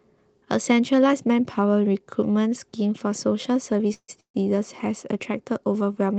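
Speech carried over a call link, with two call audio freezes close together, likely from packets stalling in transit so the jitter buffer ran dry. At 3.94 to 4.10 s the receiver extended the last sound for about 145 ms, fading to silence for the final 60 ms. At 4.20 to 4.36 s it did the same for about 140 ms, with 100 ms of silence. Each time, the speech resumes where it halted, so nothing is lost but the delay grows.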